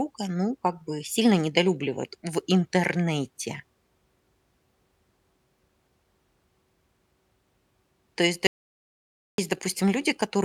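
From 8.47 to 9.38 s the speech hits an audio dropout to silence, likely a lost input, leaving a dead-flat waveform and blank spectrogram with no room tone.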